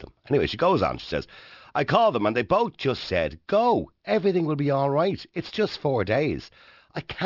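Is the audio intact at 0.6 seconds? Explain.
No. Aliasing runs through the whole speech clip: the audio was downsampled from 44.1 kHz to 12 kHz without filtering, so content above 6 kHz folds back, roughly 25 dB down, as gritty, metallic sibilance.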